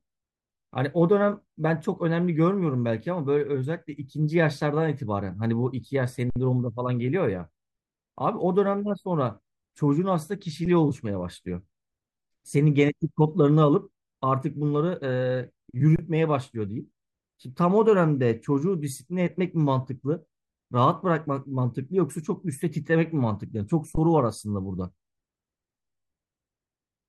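The output buffer ran empty four times, each an underrun with held sample in which the converter froze on its last value: 6.30 to 6.36 s, 10.65 s, 15.96 to 15.99 s, and 23.95 to 23.97 s. The speech briefly stalls flat, then resumes where it paused with only a soft join.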